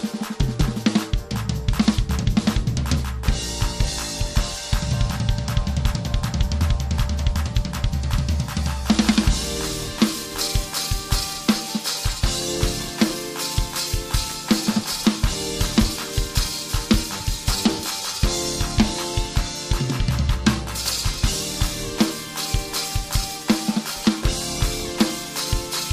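No technical fault can be heard anywhere in the audio, which holds steady without interruption or damage from its first moment to its last.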